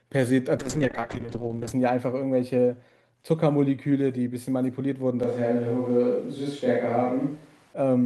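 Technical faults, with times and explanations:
0.58–1.79 s, call bitrate drop. The encoder rate falls from 40 kbps to 7 kbps and stays at its lowest for about 1.14 s. So few bits force coarse coding and strip the high frequencies. The speech turns muffled and watery until the rate recovers.
5.23–7.73 s, switch to a distant microphone. The speech abruptly turns roomy and hollow, with thinner bass, then snaps back. The level barely changes. Faint room noise sits far below the speech. The close microphone likely dropped out, leaving a farther one to carry the sound.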